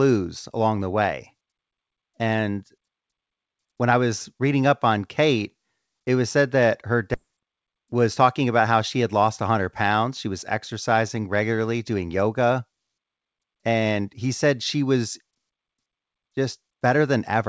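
At 7.14 to 7.16 s the speech has a skip ahead. Roughly 0.7 s of audio was discarded with no fill, so playback jumps straight to later material. On a waveform the envelope changes abruptly at the splice, and a spectrogram shows harmonics and formants breaking off without any silent gap.

From 7.72 to 8.45 s a jitter buffer speed-up follows. The receiver trims short pitch-period slices until a few tens of milliseconds are gone, so the speech runs about 5% fast at unchanged pitch and sounds slightly hurried. On a spectrogram, syllables look compressed in time while harmonic spacing stays the same. Throughout, the call path's G.722 coding leaves nothing above 8 kHz.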